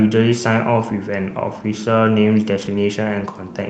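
At 1.63 s, and again from 2.57 to 2.79 s, there is a lost packet rebuilt from error correction. Each missing packet was replaced by the low-bitrate copy carried in the next one, so the audio never drops out. Those stretches sound rougher and noisier.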